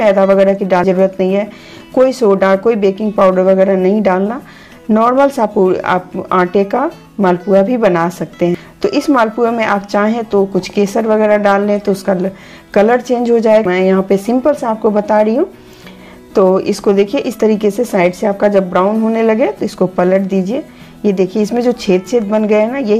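At 0.84 s the sound lurches forward, with about a third of a second simply missing and no gap where it went. The same thing happens at 8.55 s, then again at 13.65 s with a shorter skip of around a fifth of a second. That's likely a dropped buffer (overrun): samples weren't read out in time, got overwritten, and the surviving edges were spliced straight together.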